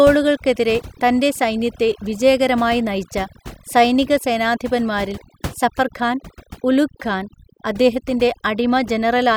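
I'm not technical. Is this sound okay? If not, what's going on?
No. Throughout the clip, this speech shows overdone noise removal: a cleanup tool set too strong. The background noise between phrases is almost gone, leaving twinkling specks. It also cut away quieter parts of the voice.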